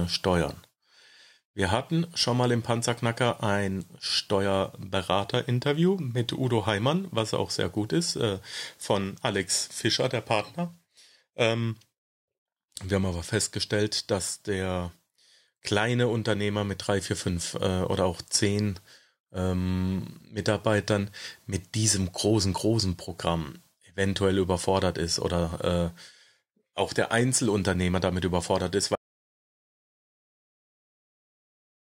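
Audio dropout to silence begins at 28.96 s, just after "damit überfordert ist", and runs to the end of this speech recording, about 3 s of dead silence with no room tone beneath it. The speech is cut off abruptly mid-flow rather than fading, and whatever followed is lost. The likely cause is the input signal being interrupted, through a disconnected device, a dropped link or an accidental mute, while the recorder kept writing silence.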